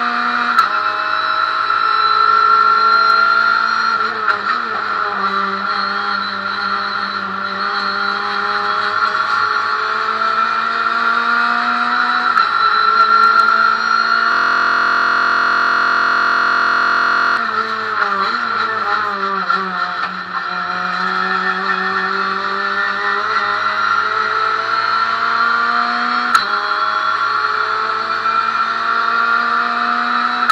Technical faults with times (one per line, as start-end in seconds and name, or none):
14.32-17.37 system hang loop